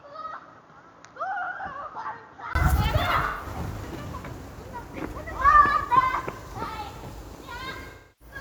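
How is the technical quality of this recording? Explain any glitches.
The recording has two kinds of glitch. One is a change in tone at the start, and the other is a pair of concealed dropouts.

Input switched to a poorer device, 0 to 2.55 s: the sound is dull, with nothing above 6.9 kHz, about 10 dB quieter, and carries faint background noise. A 20 ms gap at 2.55 s likely marks the switch to the better input.

AAC frame loss with concealment, 3.25 to 3.45 s and 7.90 to 8.35 s: the decoder rebuilt missing frames from the last good spectrum, giving smeared, phasey patches of about 130 ms and 300 ms. Those lengths fit three and seven lost frames.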